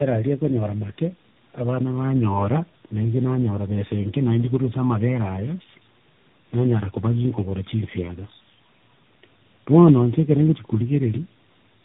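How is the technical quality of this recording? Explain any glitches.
The recording is degraded by tandem speech coding for its whole length. The audio appears to have passed through three speech codecs in series, consistent with a chain such as G.729A, CVSD and AMR-NB, joined by G.711 links. At each border it was decoded and re-encoded, so every coder worked on the previous one's errors. The result is rougher and noisier than any single codec, muffled and warbly, with nothing above 3.8 kHz.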